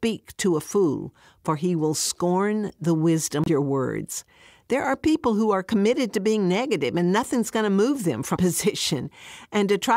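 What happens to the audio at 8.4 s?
A likely broken MP3 bit reservoir: a frame decodes using leftover bytes from a different frame, causing a garbled break from 8.35 to 8.38 s, just after "move them".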